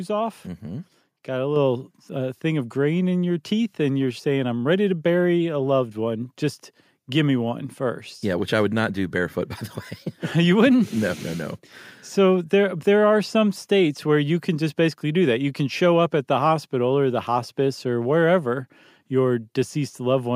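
At 1.56 s, just before "uh thing of grain", there's a microphone volume step-up: the call software decided the input was too quiet and bumped the mic's level by about 4 dB in one go, so the voice and room noise jump louder together.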